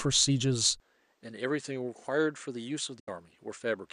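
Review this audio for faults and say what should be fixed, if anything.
From 0.8 s to the end, the speech abruptly turns duller and drops about 10 dB, with no gap at the change. This is likely an input switched to a poorer device, such as a second microphone or a headset call profile. A spectrogram shows content stopping sharply at 9.6 kHz from that point on, and a new steady noise floor roughly 40 dB under the speech. The waveform's envelope visibly shrinks. Lock the recording input to one device so the system cannot reroute mid-take.

Between 2.99 s and 3.08 s the speech fades out over 8 ms and goes silent, about 72 ms of audio lost, which fits three dropped frames. That is a digital broadcast dropout: the receiver stopped getting valid frames and muted until good ones returned, so the missing material cannot be recovered. The waveform shows a brief taper into a flat line. The spectrogram shows a blank vertical band across all frequencies. 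Improve reception or signal margin so frames arrive intact.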